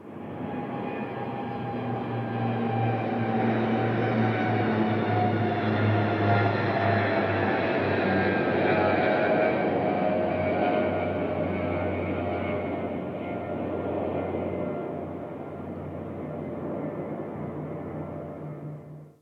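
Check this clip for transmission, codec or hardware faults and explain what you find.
Nothing stood out on listening to this audio.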